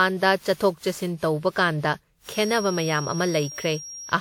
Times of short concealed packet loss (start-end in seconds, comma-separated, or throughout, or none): none